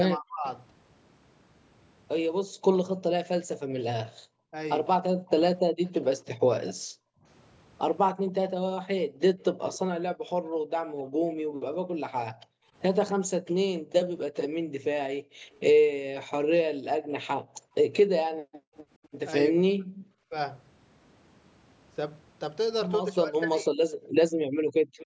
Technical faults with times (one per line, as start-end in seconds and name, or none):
0.16-0.45 speech suppressed in double talk
2.44-18.74 background gated by the echo canceller
5.27-11.03 echo leak
15.53-18.07 echo leak
19.52-23.72 speech suppressed in double talk
23.98-24.98 background gated by the echo canceller
24.03-25.05 echo leak